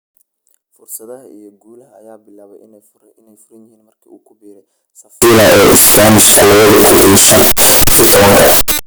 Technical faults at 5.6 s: signed and unsigned mixed up

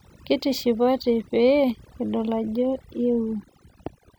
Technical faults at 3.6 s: overdone noise removal

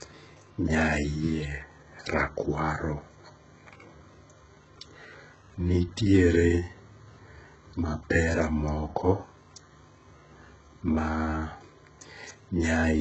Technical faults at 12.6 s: HE-AAC compression

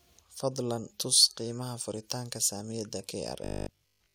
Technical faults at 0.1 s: none

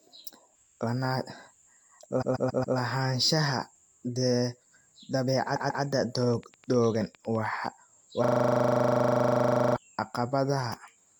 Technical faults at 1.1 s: none

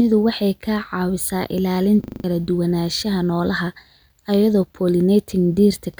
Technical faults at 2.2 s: system hang loop

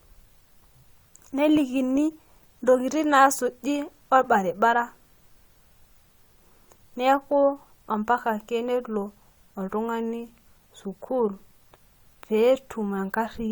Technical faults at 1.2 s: overlap between stream segments

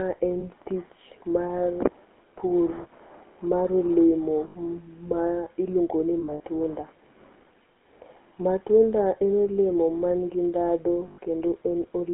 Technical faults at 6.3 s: GSM full-rate codec; lost GSM frames

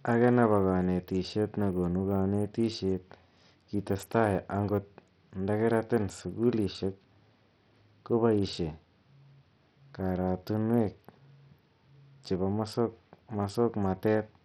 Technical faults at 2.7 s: Bluetooth SBC compression

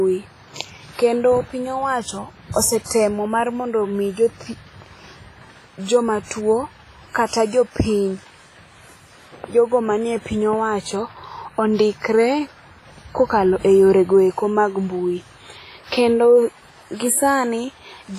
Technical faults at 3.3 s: WMA compression

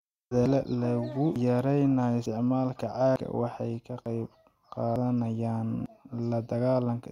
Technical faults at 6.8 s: none

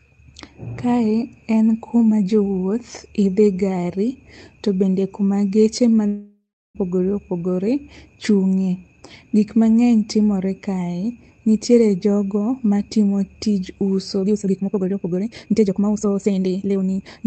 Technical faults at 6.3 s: long network dropout

